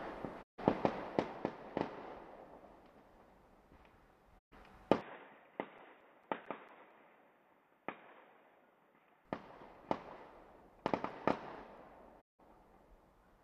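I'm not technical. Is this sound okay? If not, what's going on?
No. A digital broadcast dropout happens at 0.41 to 0.60 s, 4.37 to 4.53 s and 12.20 to 12.41 s: the receiver lost its signal, quickly faded to silence, and that sound is gone.

An input switched to a poorer device is the likely cause of the change from 5.01 to 9.25 s, where the sound turns dull, slightly quieter and faintly hissy, with nothing above 3.8 kHz.

CD scratch ticks appear from 5.56 to 7.13 s (eight ticks) and 9.97 to 11.78 s (nine ticks), about five a second. The player is hiding data a scratch destroyed on each turn of the disc.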